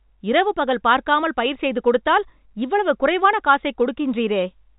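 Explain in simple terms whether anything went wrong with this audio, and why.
Nothing went wrong here.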